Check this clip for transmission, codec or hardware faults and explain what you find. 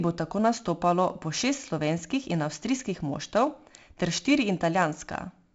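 One fault is present throughout the speech: 4-bit ADPCM compression, with heavy damage. Each sample is coded as a coarse 4-bit step from a running prediction, so quantisation error rides on the signal as gritty hiss that swells with every loud syllable and smears sharp onsets where the step size lags. Nothing reaches above 7.7 kHz, and the damage fits a 64 kbps stream. A spectrogram shows a hard ceiling at 7.7 kHz and a noise floor that rises and falls with loudness.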